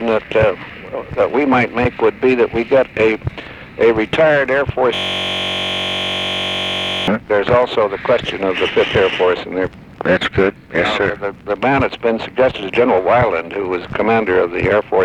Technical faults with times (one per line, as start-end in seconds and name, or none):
4.95-7.08 system hang loop